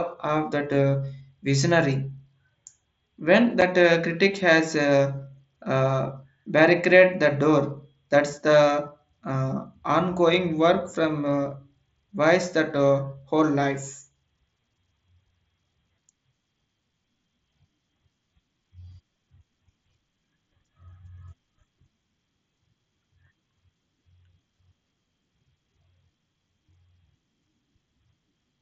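At 3.61 s the speech has a brief hole from unconcealed Bluetooth headset packet loss. About 7.5 ms of audio never arrived from the headset, which fits one lost mSBC frame. Nothing filled the gap, so it has abrupt edges.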